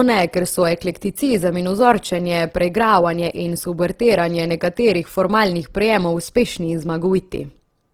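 Throughout the speech, the audio has a grainy, rough texture, where detail comes across as noisy rather than clean. This is likely Opus compression in its music (CELT) mode at a low rate, which fits a bitrate around 16 kbps. Each band keeps its overall energy, but bands short of bits get filled with folded or noisy content. Full bandwidth is kept, so it does not sound muffled, and it has less of the swirling, hollow gaps typical of MP3.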